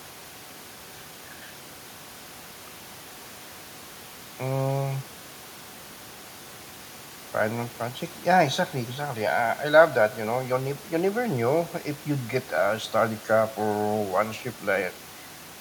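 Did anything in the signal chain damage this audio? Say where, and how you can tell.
No, nothing in the signal chain damaged this speech.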